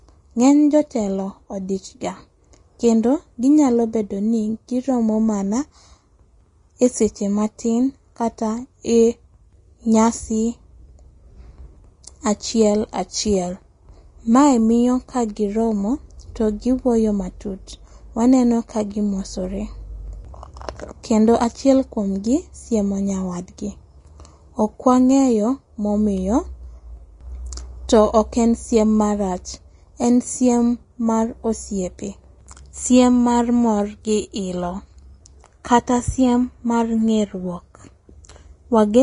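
From start to finish the speech has a hissy, grainy treble, nothing above about 10.6 kHz, and smeared consonant attacks. That's likely Vorbis compression at a low rate, consistent with roughly 32 kbps, where the upper residue gets quantised into noise.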